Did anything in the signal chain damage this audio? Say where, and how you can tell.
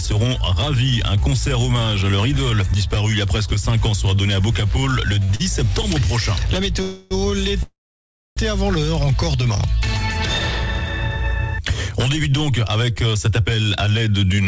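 Yes, the damage is in the network and jitter-buffer stage of a call path whose codec band-limits everything to 8 kHz, which fits G.722 at 64 kbps.

Short stalls from a late packet occur at 5.24–5.31 s and 5.35–5.42 s. In each, the last sound is held for about 50 ms, then continues seamlessly. Nothing is skipped, which separates this from packet loss, where audio would vanish instead of being stretched.

Call audio freezes occur at 6.82–7.13 s and 7.63–8.39 s. The first is a fading buzz lasting 0.29 s. The second is 0.74 s, most of it silence. Playback then resumes exactly where it stopped, so the likely cause is delayed packets emptying the jitter buffer, not lost data or a dropout.

A jitter buffer speed-up runs from 13.08 to 14.38 s. Playback is about 110% fast and sounds hurried, with around 150 ms trimmed away as repeated tiny pitch-period cuts. The pitch is unchanged, which rules out a resampling or clock-rate error, where pitch would rise with speed.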